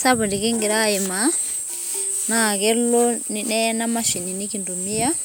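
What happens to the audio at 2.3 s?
Nothing goes wrong at 2.3 s: the speech continues intact there, with no dropout, click, distortion or other fault at that moment.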